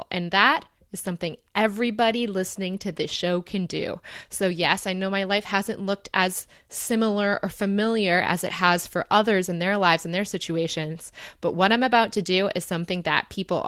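Nothing stood out on listening to the speech recording.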